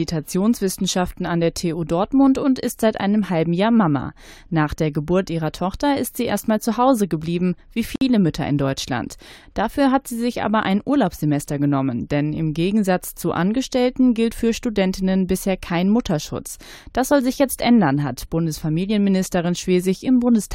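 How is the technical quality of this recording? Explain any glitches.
There is one glitch. Gap at a join of encoded pieces, 7.96 to 8.01 s: untrimmed encoder delay and padding between separate segments leave a 57 ms gap, its edges smeared by the codec, before the sound resumes.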